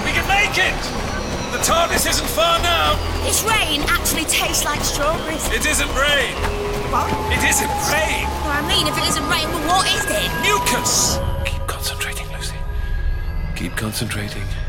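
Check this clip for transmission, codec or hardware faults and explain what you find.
Nothing amiss can be heard anywhere in this recording.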